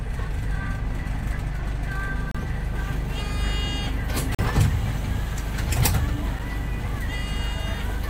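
A recording of sounds with two short dropouts: a gap between stream segments at 2.31 to 2.35 s and again at 4.35 to 4.39 s, holes of 33 ms and 42 ms of hard-edged silence. They fit 2 s segments whose timestamps don't quite meet, so the player pads the gap, though no audio goes missing.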